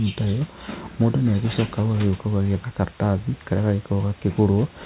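No technical faults can be heard in the speech. The audio comes through a G.711 mu-law call path with nothing above 4 kHz, and room noise sits about 23 dB and about 32 dB below the speech.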